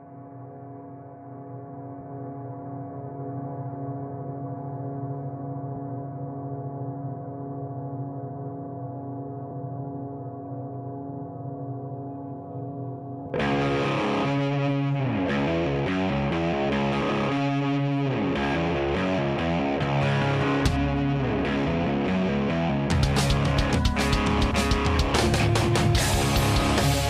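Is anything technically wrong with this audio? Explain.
Yes. There are two skips, at 5.76 s and 13.26 s, where roughly a third of a second of audio is missing and the material on either side is butted together with no gap. This is audio missing between chunks. The likely cause is a recorder or processor working in fixed blocks and dropping a short stretch each time it closes one block and opens the next, consistent with a 4-second chunk size. Each one is heard as an abrupt jump forward in the sound.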